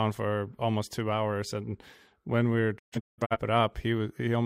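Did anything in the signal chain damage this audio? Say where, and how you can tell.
Yes. A digital broadcast dropout in the reception stage mutes the speech in several holes between 2.78 and 3.37 s, about 0.34 s lost across half a second, the longest gap 0.17 s. The waveform flatlines after 20 ms fades; the spectrogram shows blank vertical bands, consistent with failed frames being muted.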